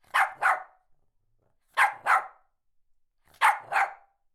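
No technical faults can be heard in this recording of sounds; the signal stays intact and continuous for its whole duration.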